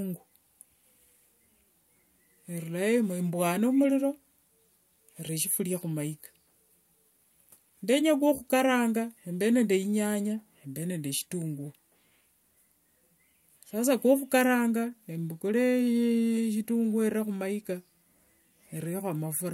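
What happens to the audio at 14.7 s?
At 14.7 s the speech carries on cleanly, with no dropout, click, distortion or other fault at that point.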